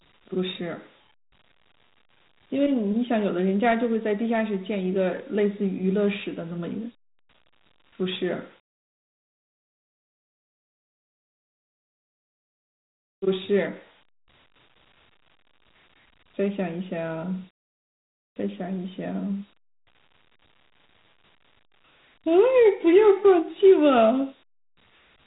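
Throughout the recording, the speech carries the marks of Dialogic VOX ADPCM coding. Nothing reaches above about 3.8 kHz, so the top of the band is simply gone. The coder stores each sample as a small 4-bit step from a running prediction. That coarse step size leaves a grainy hiss that rides along with the speech and swells where it is loud. The damage is plainly audible. The sound fits a 32 kbps stream.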